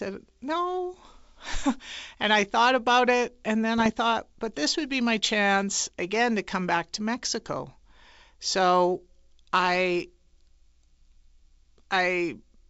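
Bits flipped on the ADPCM link between 3.78 and 3.90 s, at an error rate of roughly a third of a percent. Each corrupted bit knocked the decoder's step size and predictor off track, so the speech breaks into clicks and a rough, uneven burst for about 0.12 s.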